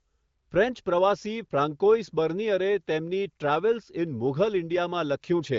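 The speech has no technical faults, and its content stopping at about 7.5 kHz with clear detail below fits the AMR wideband (HD Voice) codec at one of its higher rates, around 18 kbit/s.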